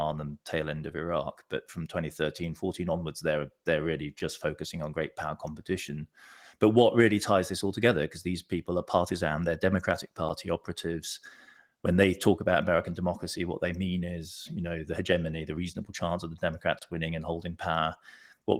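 Blocks of digital silence occur at 4.19 s, just before "focusing on great power", at 10.29 s, and from 16.79 to 16.82 s, after "reasonable chance of the". An unfilled output buffer or invalid values replaced the audio with zeros, with no fade. The 7 ms and 10 ms gaps tick, and the 30 ms gap is a short hole.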